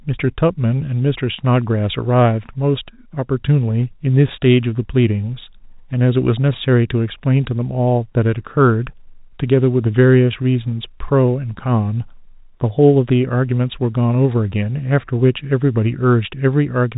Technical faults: none

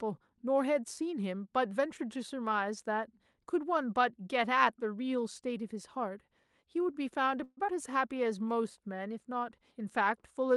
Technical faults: call audio freeze; skip ahead; jitter buffer slow-down

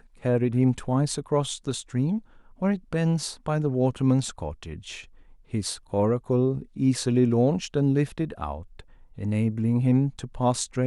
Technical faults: none

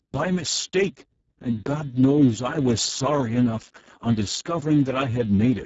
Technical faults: Speex codec

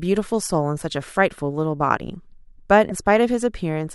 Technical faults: broken MP3 bit reservoir

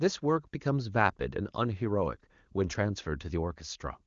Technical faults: none

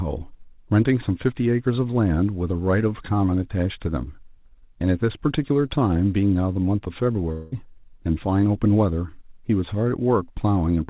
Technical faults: long network dropout

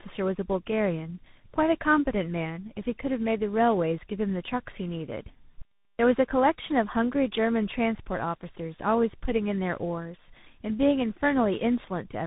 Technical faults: tandem speech coding; clipped start after a pause

